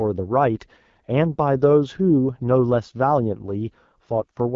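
From start to finish the speech sounds rough and raspy, with a gritty, buzzy edge and a hissy, slightly synthetic top end. Nothing reaches above about 7.5 kHz. This is the AMR wideband (HD Voice) codec running at one of its lowest rates, which fits 8.85 kbit/s. At that rate the pulse-driven vocal tract model below 6.4 kHz is too coarsely coded, and the band above it is filled with shaped noise rather than real detail.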